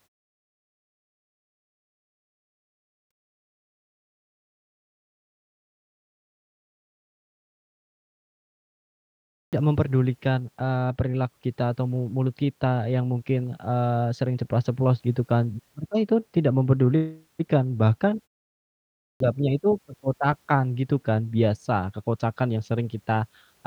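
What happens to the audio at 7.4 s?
At 7.4 s the speech bursts in abruptly out of silence, missing its opening sounds, as if the first syllable had been bitten off. This is a clipped start after a pause: after about 3.7 s of quiet, the output device had gone to sleep and needed time to wake and lock again. Everything from 6.77 s to 7.38 s, roughly 0.6 s of speech, was swallowed before the audio came through.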